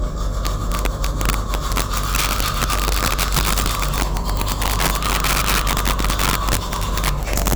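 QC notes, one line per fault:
Throughout: integer overflow. Gain pushed the signal about 5 dB past full scale and the sum wrapped to the opposite sign instead of limiting. Roughly two percent of samples flip across the range, so loud peaks produce violent cracks far sharper than clipping.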